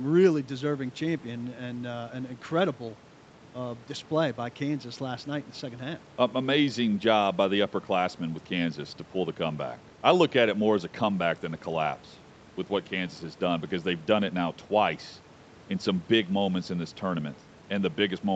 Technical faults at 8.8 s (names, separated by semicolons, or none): none